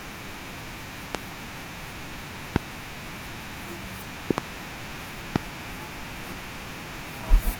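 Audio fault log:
1.15–1.17, 2.56–2.58, 4.31–4.40 and 5.36–5.38 s, loud pop: sharp thumps about 25 dB above the speech, a double pop at 4.31–4.40 s, likely from electrical pulses. The waveform shows tall isolated spikes, and the spectrogram shows thin full-height vertical lines over the continuing speech.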